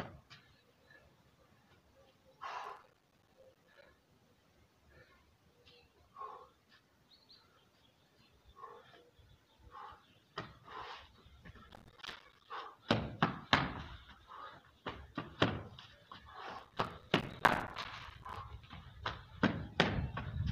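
Three bursts of processor overload crackle at 2.64–3.86 s, 11.69–12.48 s and 16.59–18.36 s: the audio keeps dropping tiny silent gaps, which fits missed deadlines on roughly 5 ms buffers.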